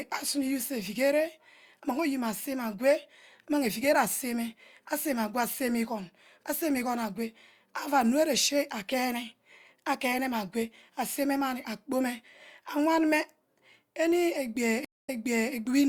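At 14.85 s the connection dropped and the player reconnected, restarting its decoder mid-stream: a stream reconnect. The speech cuts to silence for 235 ms, then picks up 456 ms earlier, repeating a short stretch that fades in, through 15.54 s.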